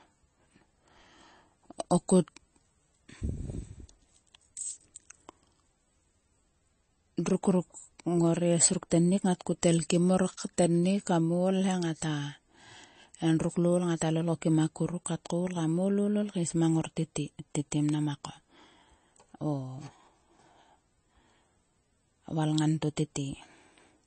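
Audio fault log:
Throughout: MP3 compression. Nothing above 8.3 kHz; the treble is cut at a fixed frequency, and weak spectral lines switch on and off between frames, giving a watery, swirly texture and metallic chirps on s sounds. The damage is plainly audible and likely fits a 32 kbps MP3 encode.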